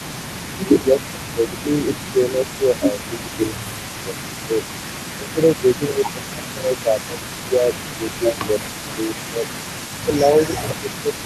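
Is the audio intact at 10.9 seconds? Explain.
No. A faint delayed copy of the speech, about 15 dB down and trailing by 450 ms, runs from 0.0 to 11.25 s. This is an echo leak, likely from a far-end echo canceller letting its loudspeaker pickup through. From 10.04 to 11.25 s the speech also dips by as much as about 15 dB. That is speech suppressed in double talk: the canceller, likely unable to separate talker from echo, turns both down.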